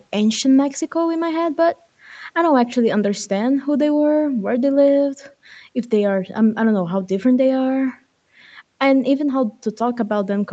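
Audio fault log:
No faults found.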